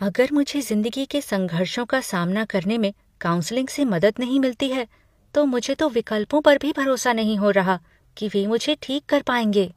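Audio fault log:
1.32 to 9.77 s, adaptive stream at a lower bitrate: the speech abruptly turns thinner and swirly with no gap, nothing above 18.5 kHz, which fits a drop to a low-bitrate HE-AAC stream.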